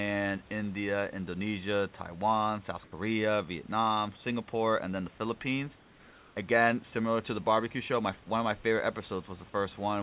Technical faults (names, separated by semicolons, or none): comfort noise in place of the background